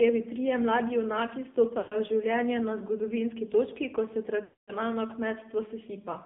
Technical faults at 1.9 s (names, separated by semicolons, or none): AMR narrowband mobile codec; lost AMR speech frames